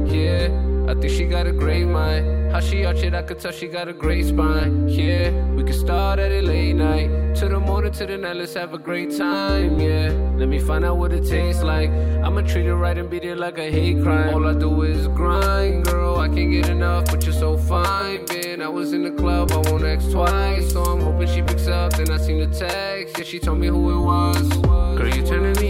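Nothing is technically wrong with this audio, so there are no times or causes to give.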